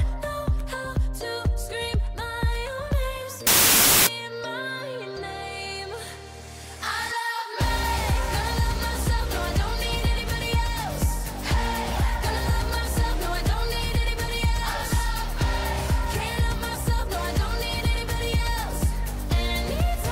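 From 3.47 to 4.07 s, wrong sample width: 32-bit samples read as 16-bit give harsh noise over a buried sound at half speed, an octave low.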